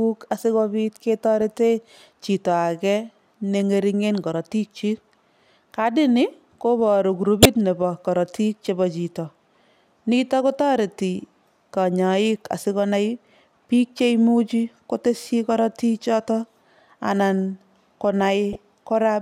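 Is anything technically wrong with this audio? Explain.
Yes. The speech contains two instances of a corrupt frame decoded. At 7.43 to 7.46 s, a short, stronger burst of misplaced energy occurs. At 18.53 to 18.58 s, a weaker one peaks at about -20 dBFS. In each case, flipped bits in a compressed frame gave the decoder wrong gains or codes, and it played the frame anyway. Energy landed at the wrong frequencies, producing a chirp, blip or burst of noise that lasts roughly the length of a few damaged frames.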